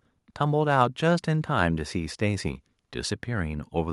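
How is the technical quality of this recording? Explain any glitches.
Nothing in the recording stood out as a technical problem on listening, so there are no glitches to explain.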